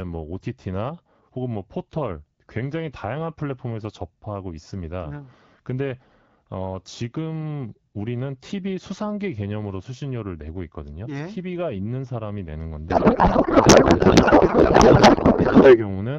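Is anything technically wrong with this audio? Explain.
Yes. From 12.89 to 15.86 s there is a codec payload misread: the receiver unpacks the AMR wideband bits in the wrong layout, which fits octet-aligned frames read as bandwidth-efficient, so the speech becomes garbled noise and warble that barely tracks it.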